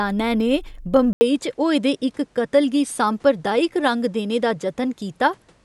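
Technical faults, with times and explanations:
1.13 s to the end, input switched to a poorer device: after a brief 80 ms gap the speech turns duller and a few dB quieter, with nothing above 11.7 kHz and a fresh noise floor about 40 dB down, likely because recording moved to a different, narrower-band microphone.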